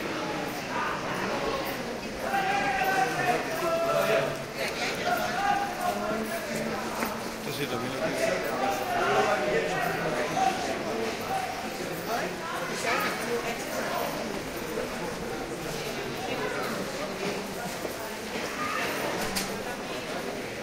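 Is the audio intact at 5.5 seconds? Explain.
No. At 5.5 seconds the sound sits inside a run of clock drift buffer slips lasting from 1.53 to 19.13 seconds. A click or pop recurs every 1.6 seconds, about ten in all. The likely cause is two devices running on separate clocks that disagree by roughly 700 parts per million. Their shared buffer slowly drifts until a block of around 70 samples is dropped or repeated. Each slip breaks the waveform and produces the tick.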